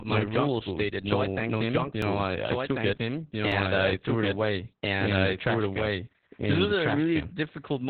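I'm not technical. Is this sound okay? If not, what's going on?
No. The speech is mixed in twice, most likely from a second recording path running late. This doubled audio track puts a full copy about one and a half seconds behind, at roughly equal loudness.

Heavy Opus voice compression has squeezed it into a narrow telephone-like range, so the speech sounds muffled, hoarse and slightly robotic throughout.

At 2.02 s, just before "know I I took", and at 3.52 s, between "I I took it" and "I threw it away", a dropped buffer (overrun) likely lost a few milliseconds, leaving a tiny skip.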